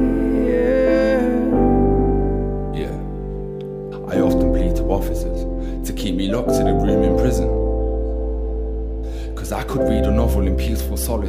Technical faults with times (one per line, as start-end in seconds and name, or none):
none